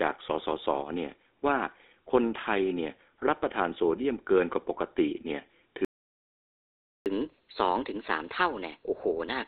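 Across the whole speech clip the GSM full-rate codec adds a buzzy, gravelly roughness, consistent with 13 kbps coding; a spectrogram shows nothing above 3.7 kHz. From 5.85 to 7.06 s a playback stall cuts the sound for 1.21 s, likely from the player running out of data, leaving a flat, empty waveform gap. From 7.06 s to the end at 9.47 s, catch-up at higher speed plays 1.15 times fast, raising pitch about two semitones, with visibly widened, upward-shifted harmonics.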